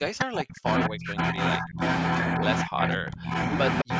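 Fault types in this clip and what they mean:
Speech suppressed in double talk: The speech dips or drops out in pieces at 0.0, 0.87, 1.58, 2.36, 2.63 and 3.83 s. Most of these dips are deep, about 30 to 40 dB. The longest last well over half a second. The one at 2.36 s is only a slight dip. The likely cause is an echo canceller that heard the far side talking at the same moment and turned the near talker down along with the echo.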